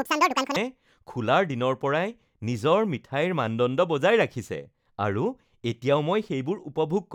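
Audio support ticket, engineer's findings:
Audio read two samples at a time (double speed), 0.00 to 0.56 s: speech runs exactly 2x fast, pitched a full octave up. Probable component: reader misframing paired samples, assuming stereo or double width. Unlike most sample-rate mismatches, the ratio is exactly 2.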